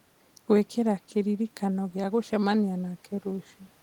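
No technical faults can be heard anywhere in the speech.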